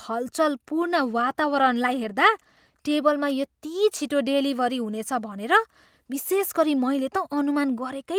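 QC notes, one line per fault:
0.82–2.85 s, call bitrate drop: just before "टेबलमा यति" the speech turns coarser and duller. The call's bandwidth estimate fell, so the encoder had to squeeze the audio into far fewer bits, which fits a cut from 32 to 16 kbps, held at its lowest for about 1.97 s. With fewer bits the codec quantises more coarsely and trims high frequencies, so the speech sounds rough and muffled until the bitrate recovers.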